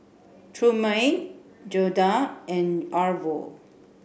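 Nothing in this bit of speech sounds off; there's no glitch or hiccup anywhere to point to.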